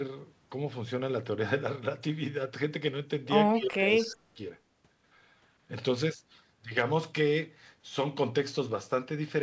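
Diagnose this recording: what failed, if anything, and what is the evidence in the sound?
Between 3.53 and 4.39 s the speech dips by about 20 dB and breaks into pieces, losing roughly 0.7 s in total. This is speech suppressed in double talk, likely from the call-processing echo canceller ducking the near talker while the far side spoke. A network dropout would cut cleanly to silence instead.

From 3.95 to 4.15 s a faint delayed copy of the voice trails the original by 180 ms, about 20 dB below it. This is an echo leak, likely residual loudspeaker pickup that the echo canceller missed. Room reverberation would decay smoothly instead of repeating at a fixed delay. The G.722 band limit at 8 kHz applies to both copies.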